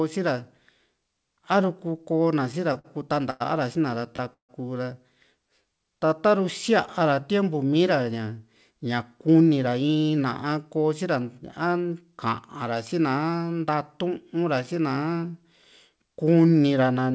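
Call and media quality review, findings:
Repeated stalls (stutter), 2.52–2.86 s: four short holds on the last sound, the longest about 54 ms, about a quarter of the span filled by concealment. Jitter buffer repeatedly running dry on late packets; receiver extends prior audio, then resumes in place. Nothing lost, delivery drags.

Short stall from a late packet, 3.30–3.42 s and 4.16–4.21 s: sound held too long, 100 ms then 23 ms, slight buzz or dip. Packet missed its playout slot, buffer empty, last sound stretched until arrival. Each adds delay equal to its hold.

Call audio freeze, 4.33–4.51 s: brief buzz or hiss fading into about 110 ms of silence, 154 ms gap in total, audio resuming where it stopped. Likely packets held in transit, jitter buffer empty, concealment decaying to silence. Nothing missing.

Jitter buffer slow-down, 5.49–7.16 s: audio running at about 93% speed, pitch unchanged, sounds drawn out. 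Receiver repeating pitch periods and pause fragments to rebuild reserve, adding 124 ms in total.

Jitter buffer speed-up, 9.27–11.93 s: audio running at about 109% speed, same pitch, hurried feel. Buffer over target, likely after a packet burst; receiver trimming short pitch-period pieces, roughly 0.2 s removed overall.

Call path band-limited above 8 kHz, consistent with G.722 at 64 kbps.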